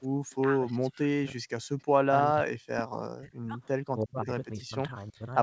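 At 0.08 s the room background is pulled down hard by the echo canceller and comes back by 0.15 s. The microphone signal is attenuated by about 39 dB for roughly 70 ms while the far-end loudspeaker is active. The result is a brief hole in the ambient noise floor, with the background coming back once the canceller releases.

From 0.31 to 0.35 s there is an echo leak: a faint delayed copy of the speech, trailing the original by 326 ms and sitting very low, around 40 dB below the direct speech. The likely cause is a far-end echo canceller that failed to remove all of the loudspeaker signal its microphone picked up, so a residual scrap of echo was sent back down the call.

The talker's speech is then repeatedly suppressed in double talk, at 0.43 to 1.45 s, 2.21 to 3.59 s, 4.03 to 4.32 s and 4.55 to 5.34 s. In each stretch the voice dips sharply, by around 40 dB at worst (closer to 35 dB in the 4.03 s event). 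This likely happens because both sides were talking at once and the canceller could not separate local speech from loudspeaker echo, so it turned everything down.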